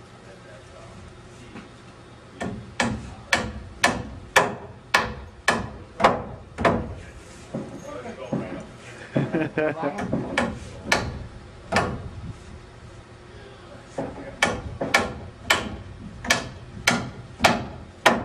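No technical faults can be heard anywhere in the audio, with the signal staying continuous and stable throughout.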